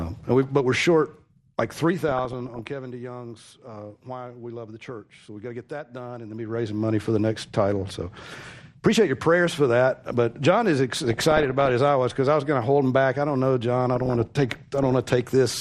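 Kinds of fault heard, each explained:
MP2 compression: Throughout, the sound is dull, with upper bands switched off and a gurgling, granular coarseness in what remains. It fits MPEG Layer II coding at a low rate, likely around 80 kbps. Unlike burbling, this damage is constant rather than bursting.
DAB burbling: Bursts of noise break out at 2.08 to 2.61 s, 10.92 to 11.71 s and 13.95 to 14.93 s, where bit errors corrupt the coded audio and put short blips of noise into single sub-bands. Unlike steady compression dullness, it comes in episodes.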